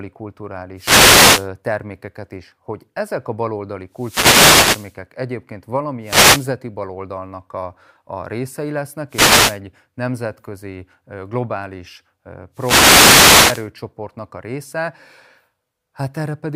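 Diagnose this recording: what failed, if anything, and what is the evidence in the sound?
The wireless microphone's analogue radio link failed before conversion. Wireless microphone noise hits appear at 0.76–1.49 s, 3.92–4.98 s, 6.02–6.48 s, 9.09–9.60 s and 12.53–13.70 s. Each is a static burst over the speech. Reflections cancelled the FM signal, letting receiver noise through.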